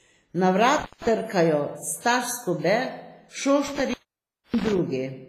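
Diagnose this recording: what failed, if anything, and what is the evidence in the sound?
Codec stage: heavy smearing throughout, ringing and washy, with hiss breathing with the speech. The spectrogram is empty above 15.5 kHz, with holes where weak lines were zeroed. This fits likely WMA compression near 24 kbps.

Analogue wiring: intermittent contact at 0.78–1.09 s and 3.68–4.78 s, with the line open for about 164 ms and 601 ms. On the waveform the signal collapses, with crackle spikes at each edge.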